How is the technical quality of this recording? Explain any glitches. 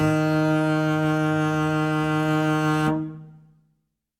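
The music comes across as technically sound, with no audible glitches or disturbances at any point in the recording.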